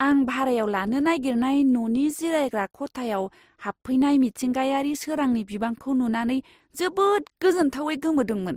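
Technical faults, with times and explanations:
Throughout: transcoding between lossy codecs. The speech carries two layers of coding artefacts at once, with the different codecs' artefacts heard together, and nothing above 20.2 kHz. This likely comes from an MP3 encode near 64 kbit/s followed by Opus near 32 kbit/s, the later one spending bits on the earlier one's errors.
Throughout: sample clock jitter. A faint roughness rides on the speech. It grows on loud and bright sounds and disappears in pauses. Tiny timing wobble in the converter clock, well under a microsecond, turns steep waveform slopes into error about 55 dB below the signal.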